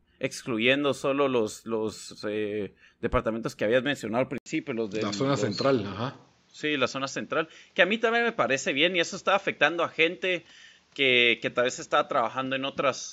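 At 4.38 s the speech drops out for about 80 ms, then returns with a different character that persists to the end: nothing above 7.6 kHz, a boxier tone, and a faint new background noise sitting well below the speech, while the level stays about the same. This pattern points to an input switched to a poorer device, likely a change of microphone or a headset profile whose narrower band and own noise floor replace the original capture chain.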